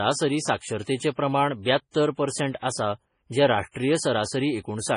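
MP3 compression runs through the whole recording: the speech has nothing above 10.5 kHz, and the treble is cut cleanly at that ceiling. The heavy damage, with a watery, swirling texture and metallic chirps on s sounds, likely comes from an encoder starved of bits, which fits a bitrate around 24 kbps. Weak frequency lines are dropped and reappear from one frame to the next, and consonant attacks smear.

Pre-echo appears from 1.91 to 1.95 s, just before "परसेंट आसा जें राष्ट्रीय". A short hiss about 37 ms long runs ahead of the sharp onset. The codec spread the quantisation noise meant for the loud attack across its whole block, so the noise also fills the quiet gap before it. The onset itself comes out softened and smeared.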